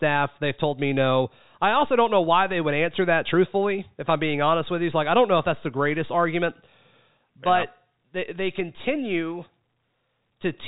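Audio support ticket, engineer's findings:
No faults found: the speech sits on a standard G.711 A-law telephone path at 64 kbps, with the band ending around 3.8 kHz and the coding's quantisation noise faint or absent.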